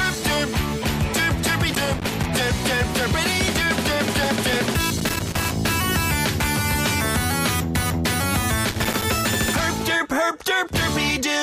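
Loose connector crackle bursts in at 1.70–2.26 s, 4.97–5.53 s and 8.65–9.05 s. A worn contact makes and breaks, chopping the signal into irregular scratchy crackle.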